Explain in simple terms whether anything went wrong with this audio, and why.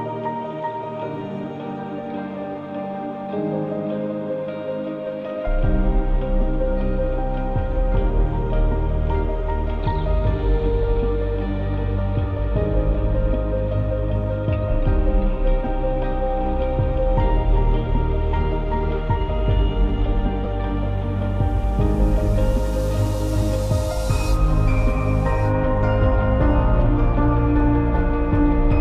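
Yes, something went wrong at about 20.43 s: a corrupt frame decoded. For roughly 60 ms, until 20.49 s, a short squeaky blip of noise cuts in. Some of the compressed data was damaged, but the player decoded it anyway, so for a few frames it produced sound at the wrong pitches. That sets it apart from a dropout: the sound doesn't simply go silent. Something foreign and chirpy briefly appears instead.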